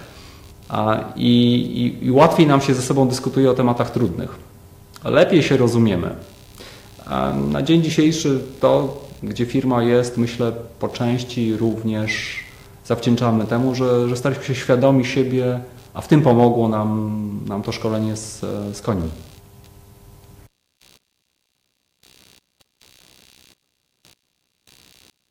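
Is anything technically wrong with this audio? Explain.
Yes. Throughout, a faint buzzing chirp pulses around 70 times a second, roughly 40 dB below the sound. This is computer activity noise: processor or graphics load disturbing the shared audio ground.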